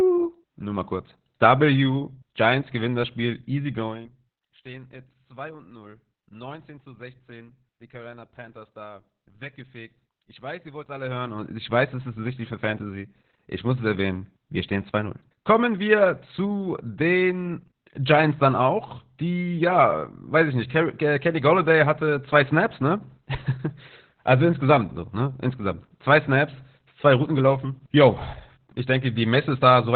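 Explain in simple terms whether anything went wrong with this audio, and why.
From start to finish, the speech sounds muffled, hoarse and slightly robotic, with nothing above 4.4 kHz. That is heavy Opus voice compression. Squeezed very hard, it keeps only a narrow, telephone-like band and rebuilds the voice coarsely.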